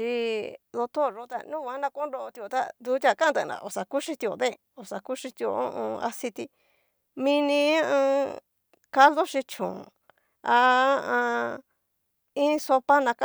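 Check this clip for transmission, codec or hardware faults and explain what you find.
Nothing to report: no fault is audible anywhere in the speech.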